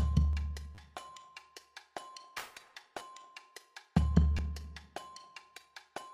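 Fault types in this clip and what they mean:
Dropped samples: single sharp clicks at 0.33, 1.16, 2.57, 3.37 and 4.61 s, each likely from a fraction of a millisecond of samples going missing, so the waveform leaps straight to a later value and leaves a thin vertical line in the spectrum.
Repeated buffer: stutters at 0.75, 2.99 and 4.38 s, where fresh audio arrived late and the device replayed its last 10 ms block three, two and then one extra time, giving brief buzzy repeats with a hard join at every restart.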